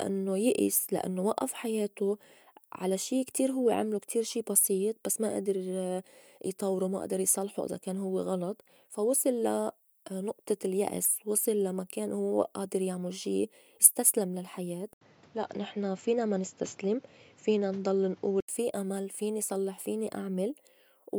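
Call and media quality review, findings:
Input likely switched to a poorer device, 14.93–18.48 s, after "يعمُل شي استسلم للحياة": 80 ms gap, nothing above 7.6 kHz, faint new noise floor, duller sound until "في أمل فيني صلّح".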